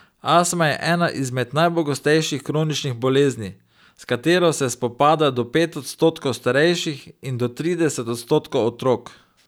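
Nothing in this speech recording stands out as a technical fault; it's free of any glitch, dropout or distortion worth pointing to.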